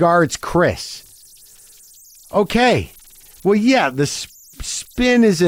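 Throughout the speech, converter idle tones from an undithered delta-sigma stage whistle faintly around 7 kHz, about 32 dB below the signal, showing as a thin horizontal spectrogram line.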